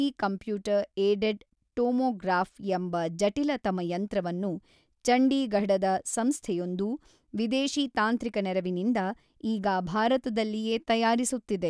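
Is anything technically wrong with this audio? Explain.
No, there's nothing technically wrong with this recording.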